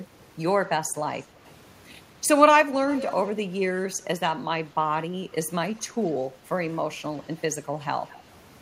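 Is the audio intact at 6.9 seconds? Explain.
Yes, the speech plays through 6.9 seconds intact, with no dropout, click, distortion or other audible fault at that moment.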